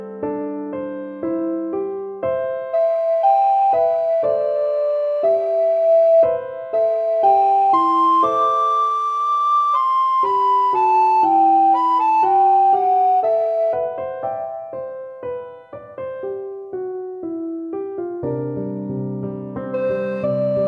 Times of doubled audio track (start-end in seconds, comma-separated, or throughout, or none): none